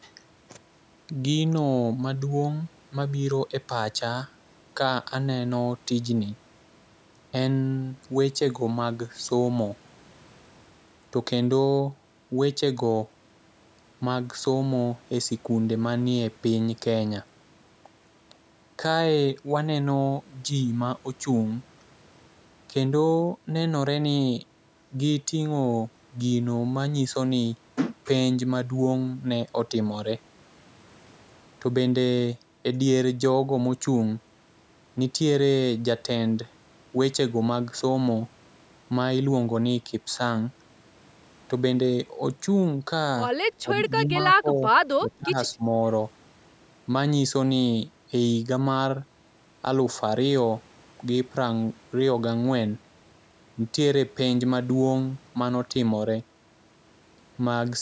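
Speech clip in which the level dips sharply four times, at 43.62–43.7 s, 43.95–44.65 s, 45.0–45.37 s and 45.54–45.71 s, by about 20 dB (about 15 dB in the last). This is likely speech suppressed in double talk, where an echo canceller turned the talker down along with the echo. The waveform shows notched-out gaps in the envelope, and the spectrogram shows those stretches fading across the band, which already stops at 8 kHz from the call's microphone processing.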